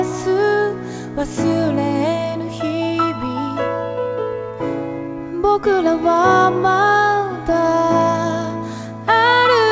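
No technical faults can be heard anywhere in the clip. The audio has come through a WebRTC call path, and nothing is present above 8 kHz, which fits a G.722 call codec running at 64 kbps.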